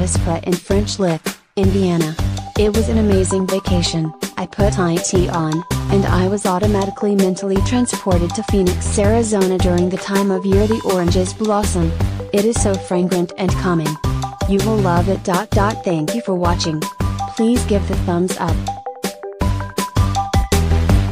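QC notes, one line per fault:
No technical faults were found anywhere in the signal.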